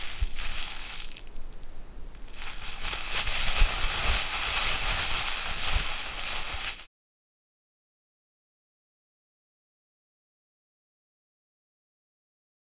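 Nothing stood out on listening to this recording of sounds.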